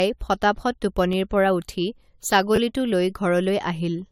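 Speech throughout sounds swirly, smeared and hollow, with softened consonant attacks and a hard spectral ceiling at 17.2 kHz. It is likely generation loss from around five repeated AAC-LC encodes at 96 kbit/s. A spectrogram shows the flat cutoff plus speckled holes and blurred onsets. A repeated buffer at 1.13 s plays one roughly 11 ms block twice, heard as a click. Another from 2.56 to 2.58 s plays its block three times as a brief buzz, which fits a 512-sample buffer. Each appears on the waveform as identical adjacent segments with hard joins.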